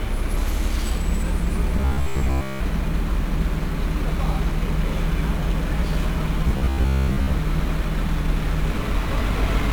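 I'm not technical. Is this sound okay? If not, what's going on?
No. The whole clip was squeezed with 1-bit DFPWM compression, which stores just one bit per sample, so everything sounds fuzzy and crackly, and the treble is dulled or replaced by hiss.

From 1.76 to 2.60 s and again from 6.48 to 7.33 s there's a robotic sound from repeated short buffers. New audio likely arrived too slowly, so the player kept replaying the same tiny 15 ms slice, about 67 times a second. That buries most of the real sound in a stiff metallic buzz.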